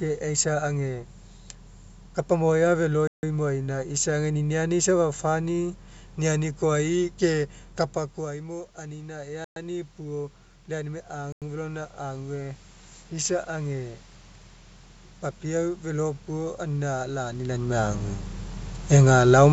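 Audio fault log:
3.07 to 11.42 s, Bluetooth stall: The sound drops to silence three times, at 3.07 to 3.23 s, 9.44 to 9.56 s and 11.32 to 11.42 s. The gaps last 156 ms, 118 ms and 94 ms. Each time the audio resumes after a clean cut. This is likely a wireless dropout. Interference delays packets, the headphone buffer empties, and playback halts until the resent data arrives.
7.94 to 13.94 s, automatic gain rising: Near 8 s the talker moves away from the microphone, and the input level falls by about 13 dB. The gain control hears the quieter signal and pushes its gain up by about 10 dB. It does this slowly, over six seconds. The voice and the room noise swell together as the gain climbs, because the control lifts everything it receives.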